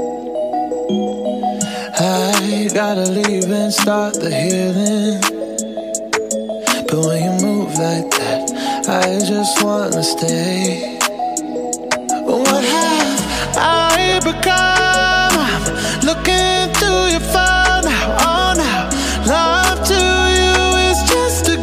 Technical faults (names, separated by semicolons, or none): damaged data in a compressed stream